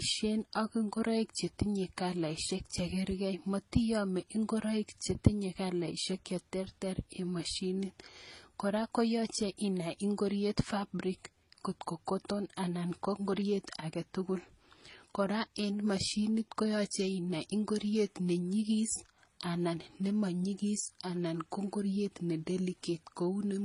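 From start to finish, the speech carries the mixed artefacts of transcoding between lossy codecs. The sound is smeared and swirly, with a metallic, warbling quality and a thin, synthetic top end. The likely cause is a low-bitrate MP3 later re-encoded as HE-AAC, each stage adding its own errors to the last. On a spectrogram, nothing appears above 11.1 kHz, leaving a hard ceiling, while the band below shows blocky, patchy gaps.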